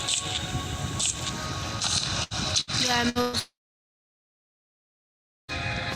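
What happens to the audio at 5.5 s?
At 5.51 s the sound resumes after a brief fading buzz from 3.39 s and about two seconds of silence. The likely cause is a long network dropout that lost 2.1 s.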